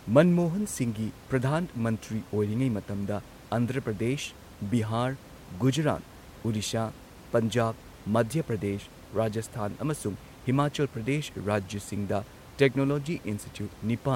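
Nothing stood out on listening to this speech, with only the room's own background noise audible at about 21 dB below the speech.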